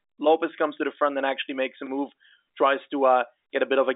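Nothing stood out on listening to this telephone-band speech recording, which carries G.711 telephone coding.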